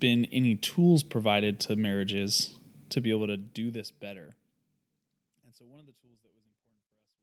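No technical faults can be heard in this speech recording. The level fades out smoothly from around 3 s to the end, as an editor would shape it.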